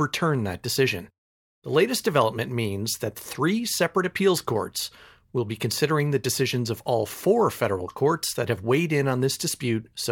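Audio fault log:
No technical faults can be heard anywhere in this speech recording, and the signal holds steady with no disturbance to its level, timing or continuity.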